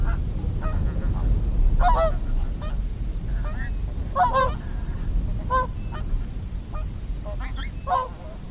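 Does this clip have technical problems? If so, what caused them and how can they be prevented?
Yes. Aliasing runs through the whole clip. The sample rate was cut without an anti-aliasing filter first, and the way everything piles up against 4 kHz points to a drop from 48 kHz to 8 kHz. Content above that 4 kHz fold point is mirrored back down to unrelated frequencies, so high-frequency detail comes out gritty and metallic, with the folded energy sitting around 30 dB below the signal and the spectrum pressed hard against the band edge. To prevent it, low-pass the audio below half the target rate before downsampling, or use a proper resampler that does this automatically.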